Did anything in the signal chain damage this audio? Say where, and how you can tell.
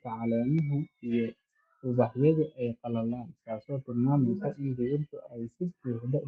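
No, the signal chain did no damage here: the speech comes through an ordinary call path whose codec, likely Opus, keeps content up to about 12 kHz, and no stage adds anything beyond that normal coding.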